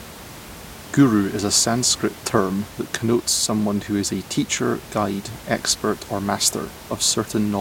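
No technical faults are audible in the speech, and the only thing underneath it is the room's own background noise, sitting about 18 dB below the speech and belonging to the recording rather than to the system.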